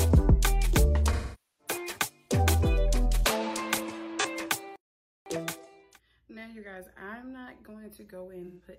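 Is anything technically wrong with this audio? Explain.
Yes, there are two faults.

AAC frame loss with concealment at 1.12 to 1.74 s, 4.20 to 4.26 s and 8.46 to 8.66 s: the decoder guesses from the last good spectrum, leaving smeared, phasey patches, with the longest fading towards silence.

Playback stall from 4.76 to 5.26 s: the sound stops mid-flow for half a second, then resumes, likely because the player's data ran dry.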